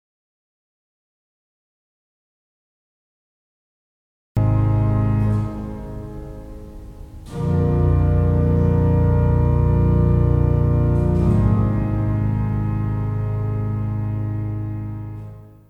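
From the very start until 4.37 s the clip is in an audio dropout to silence: silence with no room tone, then the sound cuts in mid-flow. The input was likely lost through a disconnected device or failed link while recording continued.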